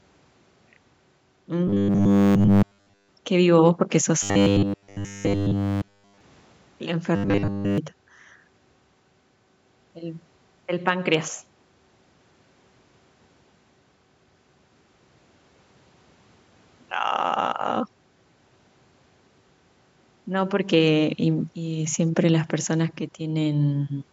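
Robotic sound from repeated short buffers hits this speech clip at 1.68–3.09 s, 4.23–6.21 s and 7.16–7.78 s: a rigid 100 Hz buzz that follows the voice only roughly, likely from a 10 ms buffer being replayed over and over while nearly all the real audio is skipped.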